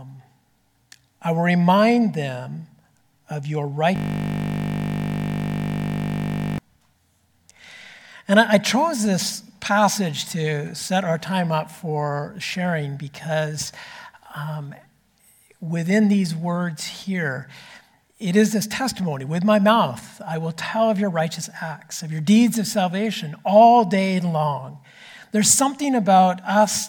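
From 3.96 s to 6.58 s the audio locks into a system hang loop. The playback side stalled while the hardware kept replaying the same 20 ms of its ring buffer, so that slice repeats over and over for about 2.6 s. At 50 repeats per second it fuses into a steady buzz near 50 Hz rather than a stutter. Unlike a dropout or underrun glitch, nothing goes silent: one identical fragment cycles with machine-like regularity.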